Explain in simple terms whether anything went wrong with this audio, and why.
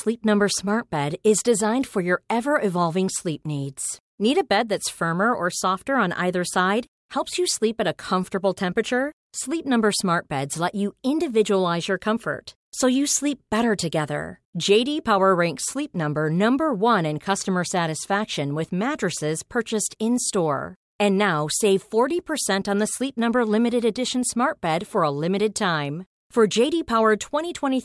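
Nothing went wrong here: the speech plays through with no point where something odd breaks in or drops away.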